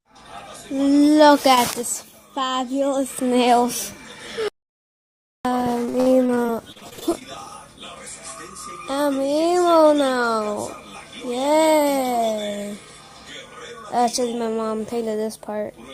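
What we've got here is audio with four separate faults stacked into its middle stretch. First, an audio dropout to silence from 4.48 to 5.45 s: almost a full second goes to dead silence with no room tone at all, then the sound picks up again mid-flow. That's most likely the input dropping out, a lost link or a momentary mute, while the recorder kept writing. Right after, from 5.85 to 7.23 s, there's repeated packet loss with that choppy quality. Short holes keep appearing, the longest around 51 ms, and each one gets patched by stretching the last bit of sound. Roughly 28 percent of that stretch is filler rather than real audio, so bits are clearly missing. Then from 8.83 to 9.28 s the jitter buffer slow-down kicks in. Playback drops to about 91 percent speed at unchanged pitch because the receiver repeats pitch periods to rebuild its reserve, adding about 46 ms, so things sound a touch drawn out. 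Finally, 11.25 to 11.81 s has a jitter buffer speed-up, running at about 110 percent with the pitch held. The receiver trims small pieces, something like 70 ms all told, to shed excess delay, which gives that brief hurried feel.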